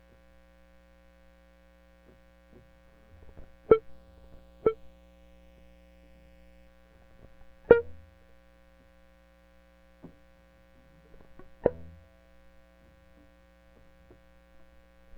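From 3.89 to 6.67 s the music picks up a doubled audio track. A second full-band copy trails about a second behind, a few dB quieter, with no decay or room colour, and it cuts in and out abruptly. Likely a slower capture path recording it twice.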